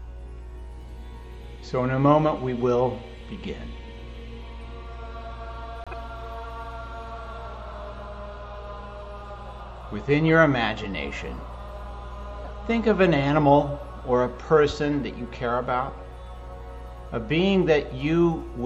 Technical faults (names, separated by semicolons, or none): corrupt frame decoded